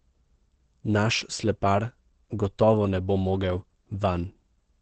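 Throughout the speech, nothing reaches above 8.4 kHz, and the sound is muffled and hoarse, with plainly audible roughness. The likely cause is Opus compression running in its speech (SILK) mode at wideband bandwidth, which fits a low bitrate of around 16 kbps.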